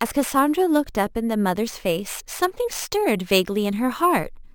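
Throughout the speech there is imaging from sample-and-hold upsampling. The sound points to material at roughly half the final rate being raised by simply repeating each sample, with no smoothing filter to remove the mirrored spectrum. The first image fills the band from about 11 kHz up to 22.05 kHz, at about 20 dB below the signal. It is heard as a bright, metallic fizz that swells and fades with the speech.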